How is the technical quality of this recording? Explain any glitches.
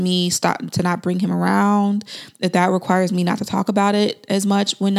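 No glitches or technical faults can be heard anywhere in this speech recording.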